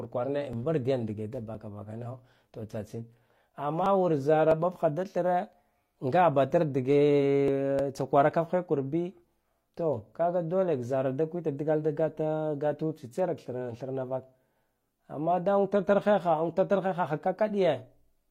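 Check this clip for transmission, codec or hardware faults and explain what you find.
Two kinds of fault are audible in the speech: six small skips from overlapping stream segments and two brief stutters from a repeated buffer.

Overlap between stream segments occurs at 0.53–0.57 s, 1.55–1.59 s (just after "dge da"), 3.54–3.58 s, 4.51–4.55 s (just before "ɓatkha da"), 6.51–6.54 s and 7.48–7.52 s. Adjacent segments, arriving roughly once per second, claim the same time span. The player trims about 35 ms of real audio each time, so the waveform jumps with a tiny skip.

Repeated buffer occurs at 3.84–3.86 s and 7.79 s. When fresh audio arrived late, the device replayed its last chunk, which fits a 5 ms buffer. It repeats four extra times at 3.84 s, costing around 20 ms, and once at 7.79 s. With a buffer that short, the hard joins give a click or brief buzz.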